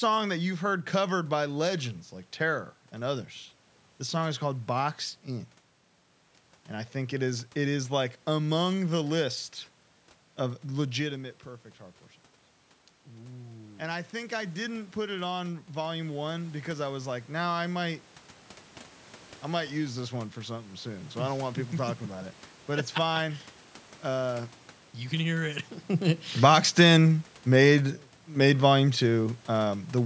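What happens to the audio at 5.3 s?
Nothing goes wrong at 5.3 s; the speech there is intact, with no dropout, glitch or distortion.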